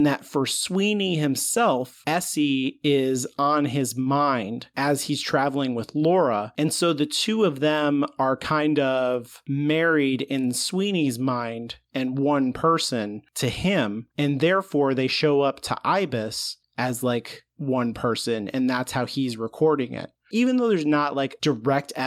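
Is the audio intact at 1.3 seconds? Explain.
Yes, the audio is intact at 1.3 seconds, with no dropout, click or other fault at that moment.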